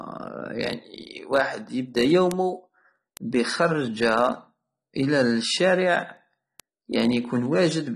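A speech clip with AAC compression damage running throughout: nothing is heard above about 12.1 kHz, and the remaining band sounds smeared, with a warbling, fizzy texture on sustained sounds and sibilants. The likely cause is AAC-LC coding at a low bitrate, one that fits roughly 32 kbps, where the encoder starves bands of bits. A plain low-pass filter would dull the top cleanly, without this swirling, unstable texture below the cut-off.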